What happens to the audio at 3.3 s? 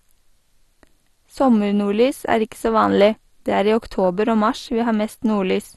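At 3.3 s the speech carries the same damage heard through the whole clip. It sounds dull, with a gurgling, granular roughness. Nothing is present above about 12.2 kHz. The likely cause is MP2 compression at a rate that fits about 64 kbps. The codec splits the sound into sub-bands and shares out too few bits. Upper bands get switched off, flickering in and out. The bands that remain are coarsely quantised, which makes the grainy distortion.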